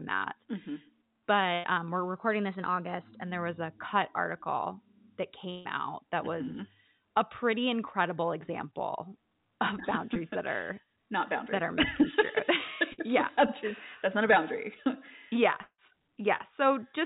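Bursts of packet loss occur at 1.54 s, 5.50 s and 12.92 s. Each time, a run of packets never reached playback. The receiver stretches the last sound into a fading buzz or hiss, for about 100, 150 and 60 ms. The sound then jumps ahead, with that span gone.

At 15.62 s the sound again smears into a fading fill, about 160 ms long, and a short silence follows before it returns at 15.80 s. This is likely a long network dropout. About 160 ms of audio never arrives.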